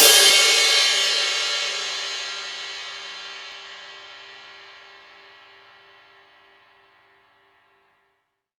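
At 0.3 s and 3.52 s the sound skips ahead, losing about 40 ms and 20 ms. The likely cause is a dropped buffer (overrun), with samples overwritten before being read.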